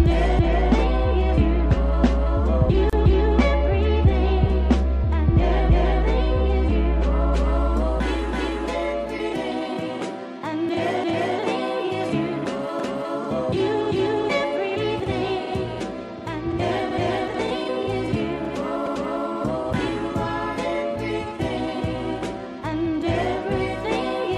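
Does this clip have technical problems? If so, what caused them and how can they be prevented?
Yes. A gap at a join of encoded pieces opens from 2.90 to 2.93 s, about 31 ms, where separately encoded segments were joined untrimmed, keeping encoder start delay and final-frame padding. A waveform shows a brief notch; a spectrogram shows a thin, soft-edged vertical blank band. Prevent it by encoding in one pass or trimming each piece's delay and padding before joining.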